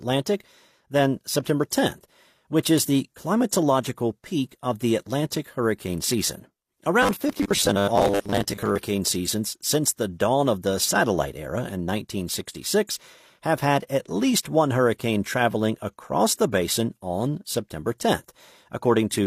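From 7.03 to 8.79 s the speech goes robotic with a rigid 100 Hz buzz, likely short 10 ms buffers repeating over about half the audio.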